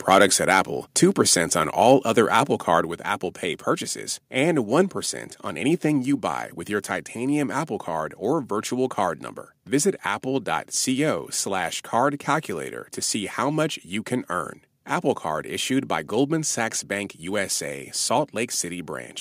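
The clip is speech with two kinds of fault. Microphone overload is heard from 0.11 to 0.6 s, and again briefly from 1.91 to 1.93 s. The loudest syllables there sound harsh and crackly. Peaks push about 4 dB past the converter's limit in the first stretch, and about 1 dB in the second. Around one percent of samples are flattened. The likely cause is input volume set too high, so the converter cuts the waveform tops. The microphone volume is stepped down three times, at 1.83 s, 2.85 s and 6.06 s. Each time, voice and background drop together in one sudden step. The drops are about 2 dB, about 4 dB and about 1 dB. This is likely the call software lowering the device's input level after detecting overload.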